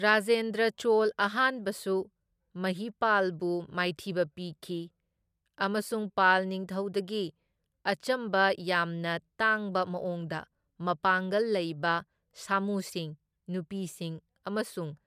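No technical faults can be heard anywhere in this speech recording. At no point does anything in the audio call for comment.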